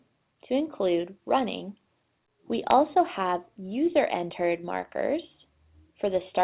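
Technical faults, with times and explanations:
No technical faults are heard in this clip.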